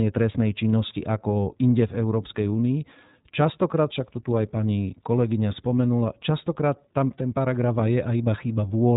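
Speech passed through the iLBC codec throughout, its audible coding damage fitting the 15.2 kbps mode with 20 ms frames; nothing above 3.8 kHz survives, leaving the speech narrowband, slightly rough and synthetic.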